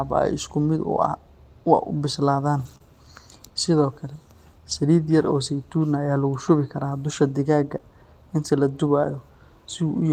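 At 2.65 to 2.75 s, about 60 ms of speech is a lost packet rebuilt from error correction. Low-bitrate copies carried in later packets stood in for the missing ones, so there is no gap, only a rougher, noisier patch. On a spectrogram the harmonics look blurred and grainy there. The same repair recurs for about 20 ms at 3.82 s and at 4.72 s.

Right after, at 2.77 to 2.82 s, comes a short concealed packet loss. About 20 ms never arrived, and the decoder extended the preceding sound before blending back, producing a brief smear or wobble. It happens again at 7.78 to 7.81 s.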